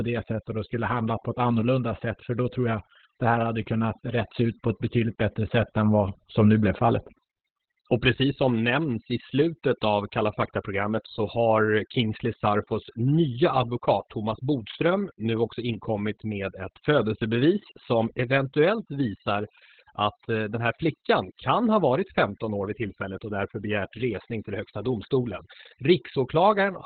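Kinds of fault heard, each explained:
Overdone noise removal: A noise reducer set far too aggressively has pulled individual frequency bands down or out whenever they came close to its noise estimate, taking the softer parts of the speech with them. The background between phrases drops to near silence dotted with twinkling specks. On a spectrogram the gaps are almost black with scattered isolated dots, and the speech shows ragged, patchy energy with holes.
Opus voice compression: The speech has been squeezed through Opus in its SILK linear-prediction mode at narrowband width, with the coarse excitation coding typical of a very low rate, consistent with a bitrate around 8 kbps. The result is muffled, hoarse and slightly robotic throughout. On a spectrogram nothing appears above about 4.4 kHz, a hard flat ceiling, while below it the harmonic structure looks smeared and grainy rather than cleanly striated.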